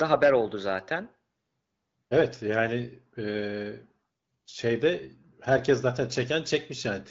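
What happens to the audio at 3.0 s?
At 3.0 s the speech passes through intact, carried by the AMR wideband (HD Voice) codec at 12.65 kbit/s with only the light coding damage that rate leaves.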